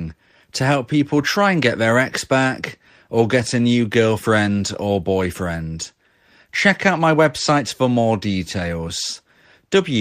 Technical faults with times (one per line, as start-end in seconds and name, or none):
none